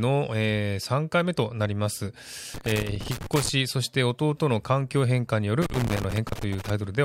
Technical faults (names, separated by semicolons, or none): loose connector crackle